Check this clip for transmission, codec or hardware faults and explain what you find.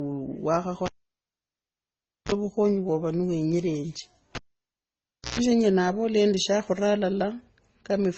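Two problems turn up in the speech here: one that runs the whole way through and one that hits twice.

Throughout, it sounds like transcoding between lossy codecs, most likely MP3 into Opus, both at a low bitrate around 24 kbit/s. The second encoder spends bits re-coding the first one's smearing, so two flavours of artefact stack up, and nothing survives above about 7.9 kHz.

From 0.86 to 2.32 s and again from 4.35 to 5.40 s, there's a cable pulled and plugged in. Each time there's a pop, then near silence for roughly 1.41 s and 1.0 s. Just before it seats, the bare tip picks up mains buzz, 34 ms at 50 Hz the first time and 131 ms at 60 Hz the second, then another pop as the sound comes back.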